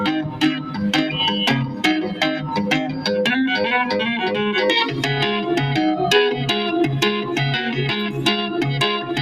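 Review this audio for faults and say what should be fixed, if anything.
A noise suppressor applied to music or sounds is active for the whole clip. A processor tuned for speech keeps judging the steady, sustained parts of this sound to be noise and pulling them down, so the level swings by about 5 dB as it reacts. Onsets slip through before the gain drops, while held portions and decays sink, giving the sound a pumping, fluttering, thinned-out character instead of a stable level.

Sound cut by the noise suppressor occurs at 0.24 to 0.79 s, 1.67 to 1.84 s and 2.88 to 3.05 s. In each spot the suppressor mistook sustained or fading sound for noise and cut it harder than elsewhere, reaching about 8 dB down in the first stretch and about 7 dB in the other two. The first dip affects about 0.4 s of material, and the later two roughly a sixth of a second each, so tails drop away abruptly rather than decaying naturally.

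To prevent both, disable or bypass the speech noise suppressor for non-speech content, or switch it to a mode designed for music and ambient sound.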